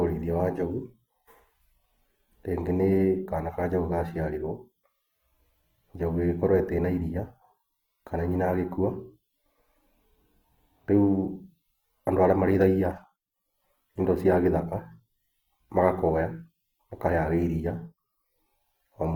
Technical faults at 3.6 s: Opus compression

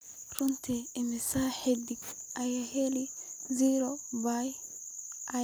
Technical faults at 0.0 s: none

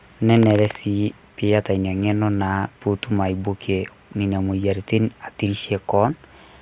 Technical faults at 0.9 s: none

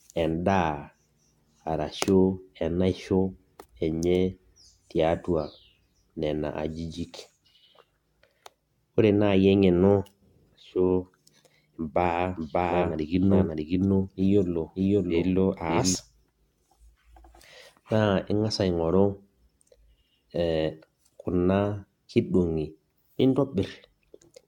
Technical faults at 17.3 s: generation loss

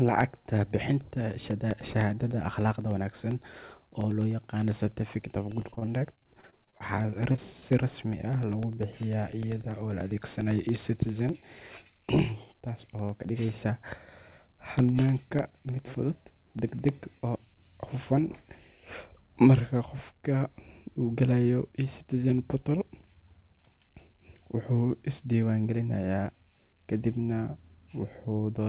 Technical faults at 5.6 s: periodic USB or driver dropouts; repeated packet loss (robotic sound)

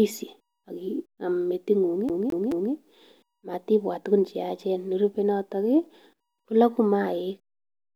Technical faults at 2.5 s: CD stuck on one turn

